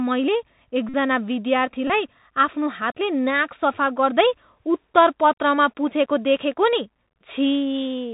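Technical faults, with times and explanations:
throughout Bluetooth CVSD headset codec: The speech sounds muffled, with nothing above 4 kHz, scratchy s sounds, distortion on loud bright sounds and a grainy hiss underneath. This fits a 64 kbps CVSD link, where one-bit up/down steps with adaptive size cannot follow fast changes.
0.89–0.95 s and 1.88–1.91 s Bluetooth headset packet repeated: Each gap becomes a short, steady buzz near 267 Hz lasting about 49 ms and 22 ms, the second just before "आफ्नो हातले". Lost packets were replaced by replaying the previous one every 3.75 ms.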